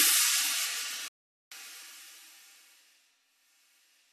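At 1.08 s the audio drops into a digital broadcast dropout. The receiver stopped getting usable frames and muted itself, fading out in about 3 ms rather than chopping hard. Silence holds until 1.52 s, roughly 0.43 s, which fits around eighteen lost frames. The sound resumes further along, with the missing stretch simply gone. Unlike packet-loss concealment, nothing is patched in with repeated or smeared audio. The gap is a clean, deliberate mute.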